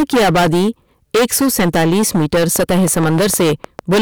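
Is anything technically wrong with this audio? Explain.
Yes. The speech is hard clipped from start to finish. The signal is driven about 23 dB past what the stage can pass, so roughly a third of the samples have their peaks cut flat. Those flat tops add high harmonics, heard as a harsh fuzz on every loud syllable. Soft saturation would round the peaks more gently.

From 2.56 s to 3.96 s there is also a train of clicks. About ten similar pulses arrive at a regular 6.5 per second, peaking about 5 dB above the speech. The likely cause is interference or a faulty connection. Unlike the clipping crackle, this ticking keeps its own steady pace regardless of how loud the speech is.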